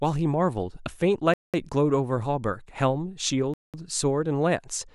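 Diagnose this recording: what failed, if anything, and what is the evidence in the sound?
Gap between chunks, at the storage or playback stage: 200 ms silences at 1.34–1.54 s and 3.54–3.74 s, repeating after every 2 s of audio, inserted at each chunk join.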